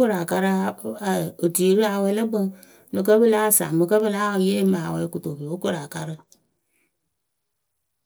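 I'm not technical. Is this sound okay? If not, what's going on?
Yes, nothing wrong can be heard in this recording.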